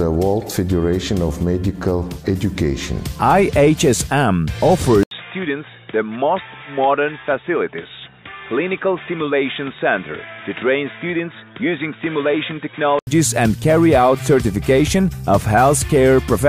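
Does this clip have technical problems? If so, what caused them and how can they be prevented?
Yes. At 5.03 s the sound drops out for 80 ms, then returns duller, a little quieter, and with a new noise floor. Nothing remains above 3.8 kHz. Full quality returns at 13.07 s. The likely cause is an input switched to a poorer device with a narrower band. To prevent it, lock the recording input to one microphone and disable automatic device or headset-profile switching.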